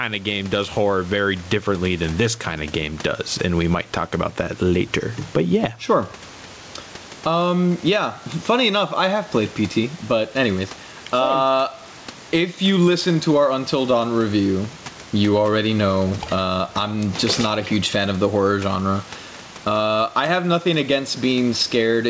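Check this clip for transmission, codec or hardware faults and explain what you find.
One fault runs through the whole clip: gain pumping. The background noise sits about 29 dB below the speech, and the gain swings by around 10 dB, because the input gain is likely set far too high and a fast limiter clamps each loud syllable. Loud and quiet passages land close in level, so the speech sounds squashed. The band stops at 8 kHz, which fits a wideband call codec such as G.722.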